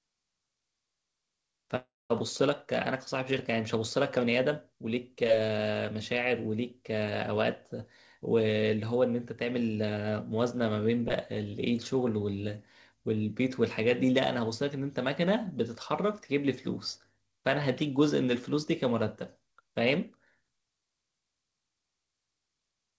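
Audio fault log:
1.76 to 2.12 s, long network dropout: the sound smears into a fading buzz, then 0.21 s of silence, likely from lost packets the receiver tried to conceal.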